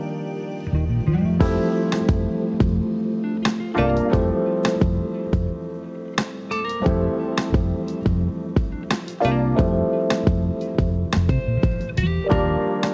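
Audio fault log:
No faults logged; the audio carries the normal sound of a WebRTC call path, consistent with G.722 at 64 kbps, with nothing above 8 kHz.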